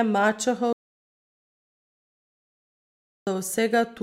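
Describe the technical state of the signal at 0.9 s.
An audio dropout to silence covers 0.9 s, running from 0.73 to 3.27 s. The speech cuts off abruptly and about 2.54 s of silence follow, with no room tone, most likely because the input was lost while recording carried on.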